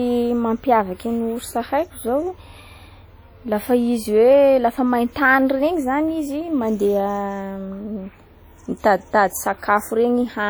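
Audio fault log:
throughout, low-bitrate audio saved at a high bitrate: smeared, swirly speech artefacts from a likely earlier low-rate encode; the spectrogram shows blurred, patchy detail, stopping near 20.2 kHz.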